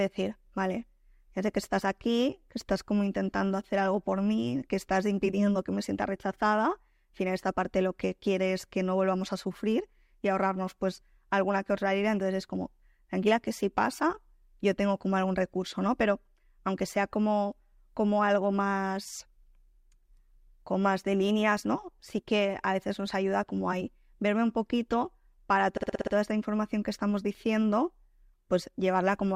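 Repeated frames from 25.77 to 26.13 s: a 60 ms block of coded audio plays six extra times, a stutter adding 360 ms just before "esta información que estamos".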